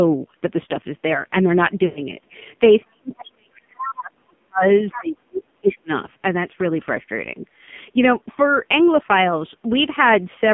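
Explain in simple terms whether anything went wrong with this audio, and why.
Yes, a few things went wrong.

The whole clip went through the AMR narrowband mobile codec, the speech codec used on older mobile networks, running at a very low bit rate here. It keeps only a narrow band, roughly 150 Hz to 3.5 kHz, so the speech sounds boxed-in and muffled. It rebuilds the voice from a simplified model instead of sending the actual sound, and at this bit rate the damage is heavy, so the voice comes out buzzy and synthetic.

From 1.86 to 2.01 s you get lost AMR speech frames. About a tenth of a second of data didn't arrive intact, so the decoder filled the gap by repeating the last good sound and letting it fade. That gap sounds smeared and stretched, then sinks toward silence before the speech picks up again.

Between 2.84 and 4.63 s, and again from 4.96 to 5.9 s, the speech keeps dipping and breaking into pieces, sometimes nearly vanishing. 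That is likely speech suppressed in double talk: the person on the other end was talking at the same time, and the phone's echo canceller couldn't tell the two voices apart, so it turned everything down. About one and a half seconds is affected in the first stretch and about a second in the second.

In the middle of that, at 3.23 to 3.31 s, 3.79 to 3.92 s and 4.92 to 4.98 s, short scraps of another voice come through. This is likely the other side's voice leaking through, because the echo canceller didn't fully remove the loudspeaker sound from the microphone. The scrap at 3.79 s is the loudest and the one at 3.23 s the quietest. The missing deep bass comes from the call's normal microphone filtering and isn't a fault.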